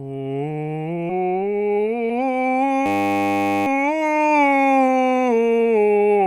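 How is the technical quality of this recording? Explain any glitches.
The quality of this music recording suffers from three glitches: two skips and one buzzing stall.

Compressed frames skipped occurs at 1.09–1.11 s and again at 2.09–2.11 s. Whole frames of the coded audio never get played. They were either missing or rejected as damaged. The first jump loses roughly 300 ms of music, which fits about fifteen 20 ms frames. The second loses roughly 150 ms, about seven frames.

A system hang loop runs from 2.86 to 3.67 s. The system froze while the sound hardware kept cycling one 10 ms stretch of its buffer. That piece repeats exactly 81 times. Repeating at 100 Hz, it becomes a steady buzz rather than a stutter. The music resumes where it stopped, so almost nothing is lost.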